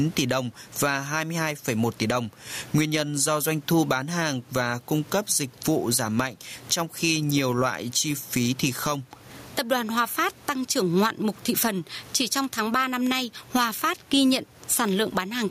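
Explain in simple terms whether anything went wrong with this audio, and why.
Gain pumping runs through the whole recording: loud and soft parts end up closer in level and the sound is squashed, most likely from a heavy automatic level control.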